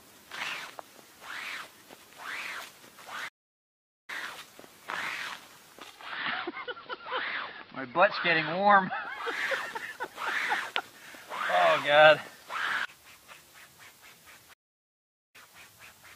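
At 3.28 s the sound cuts out mid-flow and stays silent for about 0.8 s, resuming at 4.10 s. The same gap recurs from 14.53 s to 15.36 s, again lasting about 0.8 s. Both dropouts are likely a playback stall, where the player either ran short of buffered data or had its output thread held up, so nothing reached the output until it caught up.

From 5.74 s to 9.47 s the sound takes on an added hiss, sitting roughly 35 dB under the signal, with the loudness unchanged. The cross-fade into and out of it takes 455 ms each way. This is digital radio blending to analogue: the receiver lost its digital stream and faded over to the station's AM broadcast, then returned to digital once reception recovered.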